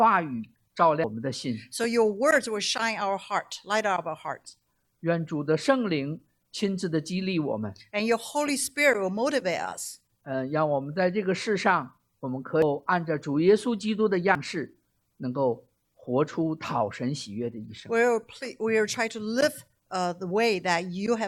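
At 1.04 to 1.07 s, then at 12.62 s and 14.35 s, damaged data in the compressed stream breaks through. Corrupted bytes make the decoder misread frames and lose sync. Each event is a short chirp or blip.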